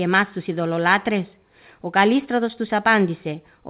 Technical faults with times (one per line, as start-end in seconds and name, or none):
none